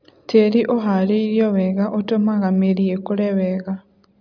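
No technical faults can be heard anywhere in the recording, and the speech signal stays steady and intact throughout.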